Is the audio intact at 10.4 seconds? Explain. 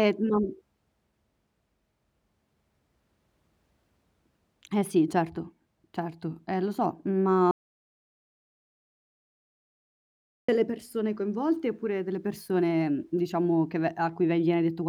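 No. At 10.4 seconds the speech is in an audio dropout to silence that runs from about 7.51 to 10.48 s, roughly three seconds of silence with no room tone. It cuts in right after "lo so ma" and the speech returns mid-flow with "persone coinvolte oppure delle". The likely cause is a lost input, such as a disconnected device, failed link or stray mute, while the recorder kept writing silence, so whatever was said in that gap is gone.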